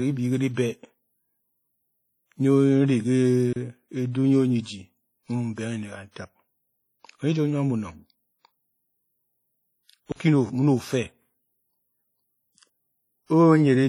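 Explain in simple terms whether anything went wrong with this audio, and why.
Throughout the speech there is heavy smearing: a ringing, washy quality with hiss that rises and falls with the voice, likely from WMA compression.

At 3.53 s and 10.12 s the sound cuts out abruptly for 30 ms and 40 ms. This is a block of digital silence: zeros played because audio wasn't delivered in time or a calculation failed.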